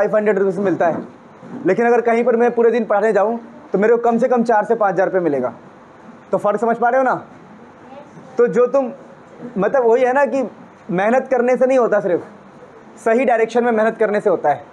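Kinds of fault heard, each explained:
No technical fault can be heard in this clip. Nothing in the sound points to a recording, transmission or playback problem at any moment.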